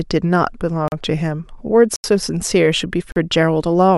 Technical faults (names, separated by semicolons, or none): block of digital silence